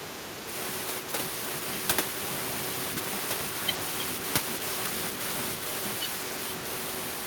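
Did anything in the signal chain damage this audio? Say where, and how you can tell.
Yes, at the call-processing stage, where the echo canceller most likely could not separate the near talker from the far end's loudspeaker echo during simultaneous talk and pulled both down. This is speech suppressed in double talk. From the start to 0.48 s the speech sinks by about 10 dB, and a shallower dip of about 5 dB hits between 1.01 and 1.15 s. Together that's around 0.6 s of audibly ducked speech.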